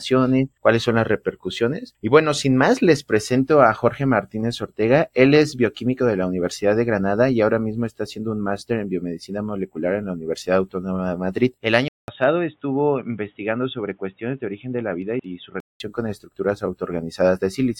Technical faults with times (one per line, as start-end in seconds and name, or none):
11.88-15.80 input switched to a poorer device